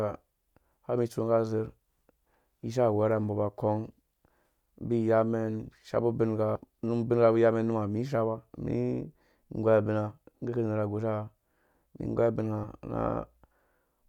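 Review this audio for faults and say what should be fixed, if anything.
The speech has compressed frames skipped in two places. At 6.55 to 6.58 s the audio jumps ahead by about a tenth of a second. At 12.63 to 12.66 s it jumps by somewhat less, around 70 ms. Both jumps fit a loss of several whole 20 ms frames. To prevent this, protect the file or stream from frame loss and corruption before decoding.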